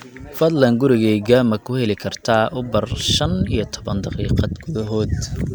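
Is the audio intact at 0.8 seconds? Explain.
Yes, the audio is intact at 0.8 seconds, with no audible fault at that point.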